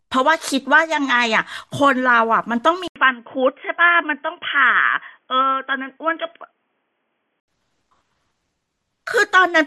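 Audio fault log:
2.88 to 7.48 s, input switched to a poorer device: At the switch there is a short silence of 80 ms. Then the speech turns dull and boxy. Nothing is heard above 3.4 kHz. A faint new background noise appears, far below the speech. The loudness stays about the same. At 7.48 s the full, brighter sound returns. The likely cause is the input moving to another microphone or a headset's call profile, which passes a narrower band.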